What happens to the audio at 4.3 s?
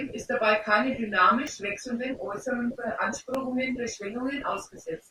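Nothing goes wrong at 4.3 s; the speech carries on intact through that moment.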